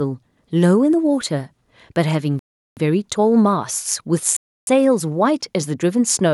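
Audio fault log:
2.39 to 2.77 s and 4.37 to 4.67 s, Bluetooth stall: the speech drops to full silence twice, for about 0.38 s and then about 0.31 s, and then resumes. The likely cause is radio interference delaying packets long enough for the headphones' receive buffer to empty, so playback halts until the retransmitted audio arrives.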